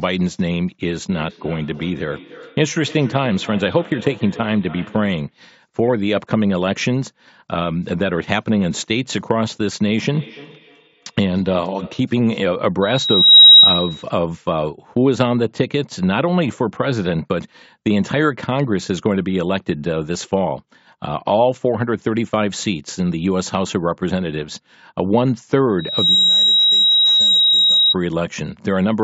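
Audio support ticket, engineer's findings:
Feedback echo between two devices: second device in the same room replaying this mic's audio, outside the local echo canceller's reach. Speech returns about every 0.3 s, thinner and ringing, at 0.84–5.39 s and 10.04–12.18 s, peaking about -19 dB and -21 dB.

Loudspeaker feedback squeal: mic picking up its own loudspeaker, loop gain above one at 3.8 kHz. A single 3.8 kHz tone swells over roughly 0.5 s at 12.82–14.03 s (about 15 dB over the speech) and roughly 0.4 s at 25.79–27.95 s (about 5 dB over).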